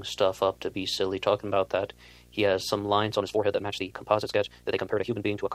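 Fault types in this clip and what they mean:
Video or display buzz: a steady 60 Hz buzz, the picture's field rate, runs under the speech for the whole clip with a layer of hash above it, sitting about 30 dB below the voice, as interference from a screen or video cable leaks into the audio path.
Time-stretched section: from 3.14 s, just after "that he has some", the pace abruptly jumps to about 1.81 times normal while the pitch stays put, sounding rushed to the end, likely from software squeezing the audio by dropping short pieces.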